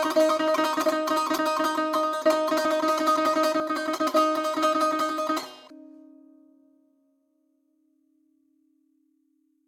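The music carries no audible technical faults: no dropouts, distortion, or timing breaks can be heard anywhere in the clip.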